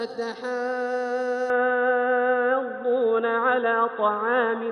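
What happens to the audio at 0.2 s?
Nothing goes wrong at 0.2 s; the audio runs through that moment intact, with no dropout, click or distortion.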